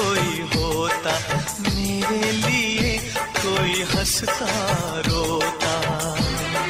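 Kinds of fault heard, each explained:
Adaptive stream at a lower bitrate: At 2.70 s the quality drops suddenly, with no gap, and stays low to the end. Codec artefacts rise. This fits a stream falling back to a much lower bitrate version, roughly a quarter of before.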